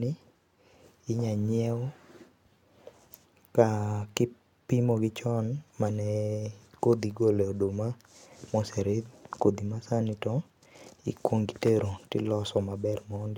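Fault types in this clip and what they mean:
No faults can be heard in this speech recording.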